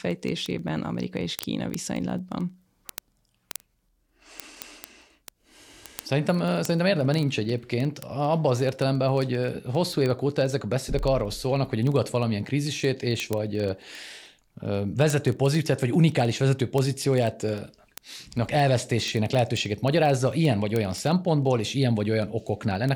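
Speech, with word clock ticks running the whole way through, from about 0.11 s to 22.93 s. A sharp tick lands roughly every 40 ms, some louder than others. That's the receiving device on its own clock, drifting by roughly 500 ppm, and slipping a single sample at each crossing.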